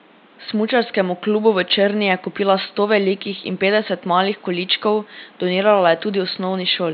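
No faults found; the room noise sits about 30 dB below the speech, and the mSBC headset link carries audio up to 8 kHz.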